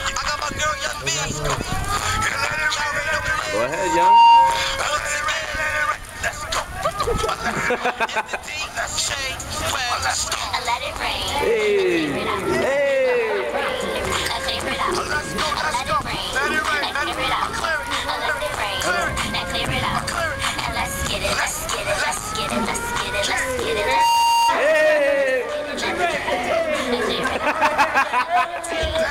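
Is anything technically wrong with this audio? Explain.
Yes, there is loudspeaker feedback squeal at 3.66 to 4.81 s and 23.77 to 24.59 s. The microphone picks up its own loudspeaker, and at 932 Hz the loop gain goes above one, so a tone swells over roughly half a second, then a third of a second, peaking about 10 dB and then about 5 dB above the sound.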